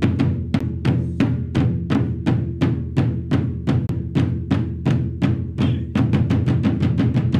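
The audio has two CD skips, at 0.59 s and from 3.87 to 3.89 s. Each time the pickup lost its track on the disc's spiral, the player muted for roughly 10 ms and then about 20 ms, and resumed on a different turn. Unlike a plain dropout, where the sound picks up exactly where it left off, the sound after each tick carries on from a displaced point, so the continuity of the material is broken.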